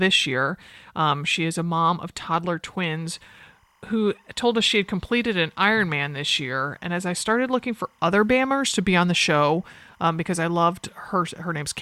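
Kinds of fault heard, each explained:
Timecode bleed: from 2.91 s, right after "a mom of toddler", to the end of the speech, a faint chirping warble sits behind the voice, roughly 40 dB below it. Linear timecode running on a neighbouring track or cable has leaked into the audio path. Its square-wave code flips between pitches near 1 kHz and 2 kHz, and the pattern repeats at 25 frames per second, giving the steady, buzzy twitter.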